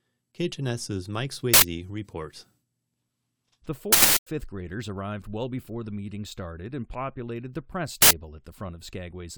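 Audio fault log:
1.54 to 1.62 s, uninitialised buffer: an 85 ms burst of loud digital noise, where a block was sent to output before any audio was written into it, so stale memory played as samples. Its length fits a 4096-sample block.
3.93 to 4.27 s, uninitialised buffer: the same fault over a longer 340 ms stretch, fitting a 16384-sample block, ending just before "graders arrived well before".
8.02 to 8.11 s, uninitialised buffer: another 85 ms burst, right after "and populated the press".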